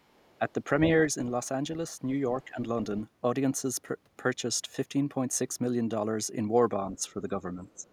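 Other side's voice leaking through, 0.00 to 0.53 s: a faint second voice sits far beneath the talker, likely loudspeaker echo that the canceller left in the microphone signal.

Speech suppressed in double talk, 2.45 to 2.58 s: the voice dips by around 10 dB, likely because the echo canceller turned both sides down while they overlapped.

The same suppression returns from 7.29 to 7.85 s and cuts deeper, by around 15 dB, again likely the canceller reacting to both sides at once.

The other side's voice leaks through again from 7.71 to 7.90 s. It is even fainter this time, likely residual echo the canceller did not remove.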